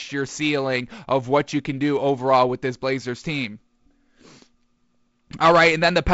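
No faults are present in this speech clip; the G.722 wideband telephone coding at 48 kbit/s band-limits it at about 7.7 kHz with light coding hiss.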